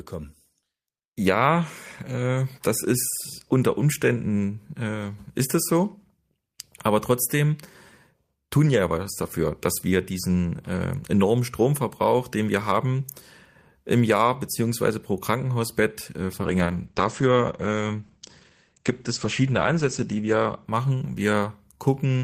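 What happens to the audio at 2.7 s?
Nothing goes wrong at 2.7 s; the speech continues intact through that moment.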